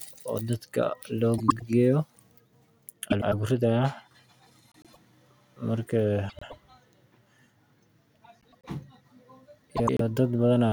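Frames out of order occur at 1.38–1.62, 3.10–3.34, 4.72–4.97, 6.29–6.54, 8.41–8.65 and 9.76–10.01 s: two adjacent runs of about 104.5 ms each (which fits four frames apiece) swap places. The speech garbles into a brief flutter, and no time is lost.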